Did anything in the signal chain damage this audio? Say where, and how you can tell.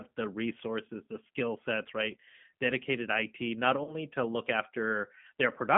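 Yes. Throughout, the speech is rough, slightly synthetic, and confined to a telephone band of about 150 Hz to 3.4 kHz. This is the G.729 codec at the codec stage: at 8 kbit/s it rebuilds each 10 ms frame from a vocal-tract filter, pitch predictor and sparse pulses, discarding fine detail.

From 3.84 to 3.96 s, just before "to look", the voice smears and fades and stays weak after. This is VoIP packet loss concealed by the speech codec, a network-stage fault. About 30 ms went missing, which fits a single lost packet. The decoder extrapolated its last pitch and filter with falling gain, and because each frame builds on the last, it took a while to recover.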